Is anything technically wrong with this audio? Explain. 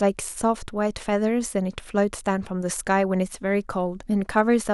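No technical faults are audible.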